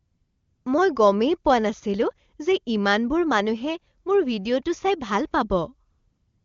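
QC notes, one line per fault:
0.00–0.65 s and 5.91–6.44 s: AMR comfort noise. The phone judged these stretches silent and stopped sending speech frames. The receiver filled each gap with synthetic noise built from a rough sketch of the background's level and spectrum. So the real background sound is replaced by a smooth, even hiss. It ends just before "মই গমেই পোৱা নাছিলো" and returns for the last half second. The wideband codec carrying the speech sounds clean, which fits a high AMR-WB rate.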